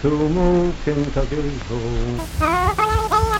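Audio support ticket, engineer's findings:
Wrong sample rate, 2.19 s to end. Sound abruptly sped up 2.76x, pitch raised about 17.6 semitones together. Playback path clocking samples without resampling; ratio fits 16 kHz material played out at 44.1 kHz. Check sample-rate negotiation at output stage.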